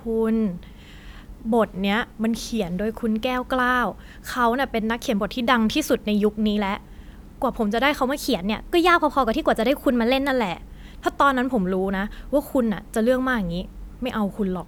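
A likely drift correction step, where clock-matching software abruptly changed the playback rate to manage its buffer, hits this speech twice. From 1.72 to 2.59 s it slows by 5.5%, dropping pitch about 98 cents. From 8.17 to 10.30 s it speeds up by 5.5%, raising pitch about 93 cents. Each time the speech then snaps back.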